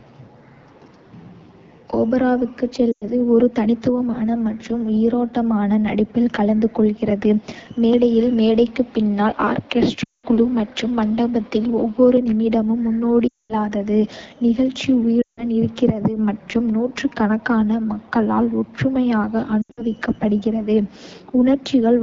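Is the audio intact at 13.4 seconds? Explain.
No. From 13.27 to 13.54 s the speech drops to near silence within two frames, then returns weak and rough. These are lost AMR speech frames: corrupted frames failed their check, so the decoder repeated the last good pitch and vocal tract settings at falling gain. The 220 ms gap fits about eleven 20 ms frames. Around this moment the speech is also raspy and gritty, which is plainly audible damage from the AMR wideband (HD Voice) codec at a low rate that fits its 8.85 kbit/s mode.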